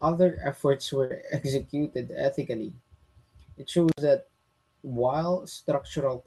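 A burst of packet loss falls at 1.04 to 1.11 s, right after "other efforts". Packets carrying that stretch of speech failed to arrive in time, so the receiver extended the last sound it had for about 56 ms, letting it fade. The speech then resumes further ahead, with about 50 ms of the original simply gone.

An intermittent contact follows at 3.89 to 4.01 s. A loose plug or cable connection opened briefly, cutting the signal for about 58 ms. Crackle marks the moments the contact broke and remade, and in between only faint hiss remains before the speech returns. The dropout sits in speech that, like the rest of the clip, carries the call codec's coding texture and a top end limited to about 12 kHz, consistent with Opus at around 32 kbps.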